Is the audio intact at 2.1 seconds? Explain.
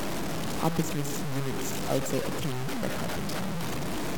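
No. Low bit depth without dither runs through the whole clip, 2.1 seconds included. The speech is likely truncated to about 4 bits with no dither, so the rounding error tracks the signal at roughly its own level, giving a harsh, grainy distortion that sputters on quiet sounds.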